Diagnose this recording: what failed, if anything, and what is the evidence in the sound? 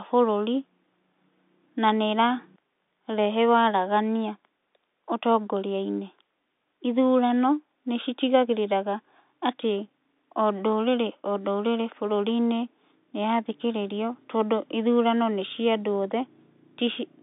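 Nothing failed in this recording.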